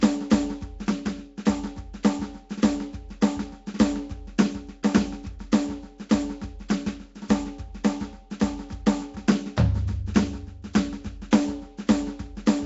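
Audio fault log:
Throughout: Nellymoser compression, likely, giving the music a rough, hissy halo and smeared underwater tone; the spectrogram shows noise-filled patchy bands and nothing above 7.7 kHz.
2.03 s and 11.31 s: pre-echo, a 15 to 16 ms hiss before sharp attacks, where block-wide coding noise fills the quiet; the waveform shows fuzz ahead of each transient.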